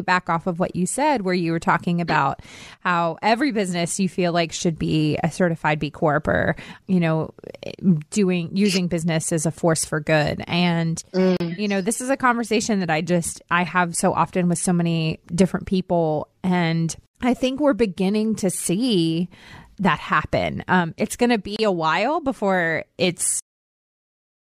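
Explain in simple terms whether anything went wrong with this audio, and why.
Two faults stand out. There is a gap at a join of encoded pieces at 11.37 to 11.40 s, just before "you know this is", and again at 21.56 to 21.59 s, between "it's going to" and "a while before". Separately encoded pieces were glued together untrimmed, leaving a brief silence, but speech resumes exactly where it paused, with nothing lost. The ending is also a cut-off end: at 23.39 s, right after "a while before", the speech stops dead mid-sound and drops to silence with no natural fade, because the final stretch never got written.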